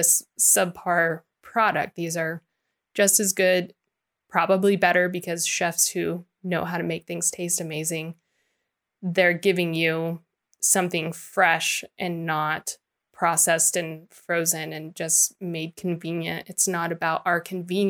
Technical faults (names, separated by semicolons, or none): none